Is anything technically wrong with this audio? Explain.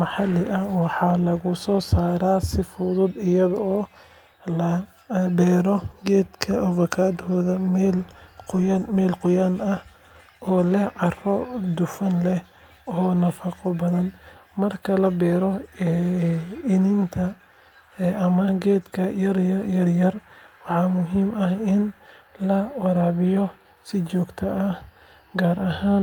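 No, nothing technically wrong can be heard here.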